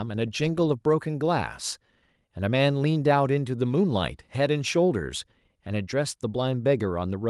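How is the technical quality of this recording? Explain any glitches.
The technical quality of the recording is sound, with no glitches to explain.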